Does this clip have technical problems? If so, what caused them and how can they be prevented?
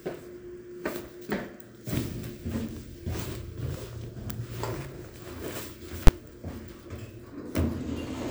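Yes. At 6.07 s there is a single loud bang caused by invalid numbers at full scale: a calculation produced infinite or invalid values that were clamped to the maximum output, holding the signal flat at one extreme value for about 12 ms, which fits a 512-sample processing block. Guard against this by checking for non-finite values after each processing stage and replacing them with silence.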